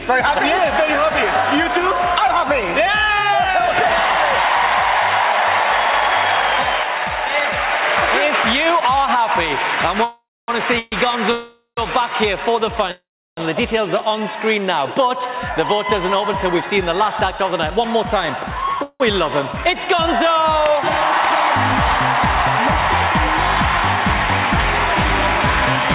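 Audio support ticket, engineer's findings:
Call audio freeze at 10.04–10.50, 10.79–10.94, 11.32–11.79, 12.91–13.39 and 18.83–19.02 s: last sound held as a fading buzz, some trailing into silence, then resumes. Likely jitter buffer underrun from delayed packets. Nothing lost, about 0.13–0.46 s delay added each.

Jitter buffer speed-up at 16.55–18.77 s: audio hurried to about 108% speed, pitch unchanged, roughly 0.2 s trimmed in small pitch-period cuts to drain excess buffered delay.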